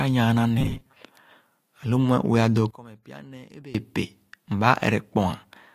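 A speech recording with two separate faults. From 0.58 to 0.96 s the voice turns into a rigid, metallic buzz near 133 Hz that only loosely tracks the speech. The likely cause is robotic sound from repeated short buffers: audio arrived too late, and roughly half of it was replaced by loops of a fragment about 7.5 ms long. Between 2.71 and 3.75 s the voice drops by about 22 dB and turns faint. That points to one channel inverted, with opposite-polarity left and right channels largely cancelling the centred voice when summed to mono.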